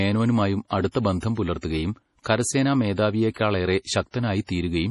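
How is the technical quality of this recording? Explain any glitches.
The technical quality is poor. Two faults are audible.

Heavy MP3 compression runs through the whole speech clip. Nothing is heard above 11.3 kHz, so the top end sounds dull. Weak frequency detail flickers in and out between frames. That gives a watery, swirly texture, with metallic chirps on s sounds. The likely cause is an MP3 encoder short of bits. The heaviness fits a low bitrate around 32 kbps. At that rate, the encoder drops the treble and zeroes quiet components to save data.

Pre-echo appears from 3.31 to 3.36 s, just after "പുലർത്തുകയും കരസേനാ". A short hiss runs for 55 ms before a sharp attack. The attack itself sounds soft and smeared. The codec spreads its quantisation noise across a whole block. Here the attack lands late in the block. So noise sized for the loud onset also fills the quiet moment before it.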